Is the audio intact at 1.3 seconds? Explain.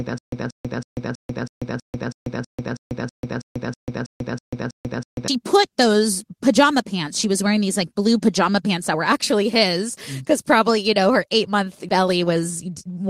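No. At 1.3 seconds the clip is in a stutter with silent gaps, which is already running when the audio begins and lasts until 5.28 seconds. A short burst of about 182 ms plays, then about 141 ms of dead digital silence follows. This repeats evenly every 323 ms, many times over. The likely cause is a stalled player or stream replaying its last fragment at each retry. The real audio for that span is lost. Normal playback resumes with "put those pajama pants".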